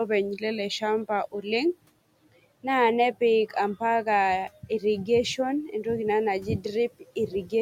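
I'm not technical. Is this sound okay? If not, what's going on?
No. There are two brief moments of speech cut by the noise suppressor, at 4.63 to 4.83 s and 7.28 to 7.52 s. The noise-cleaning step mistook quiet bits of speech for background noise and turned them down for about a tenth of a second each. Unlike a true dropout, the sound fades and comes back instead of going silent, and the faint room noise in the background sinks with it.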